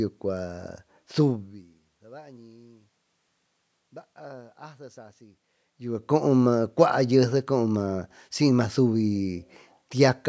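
No technical faults can be heard in this speech recording.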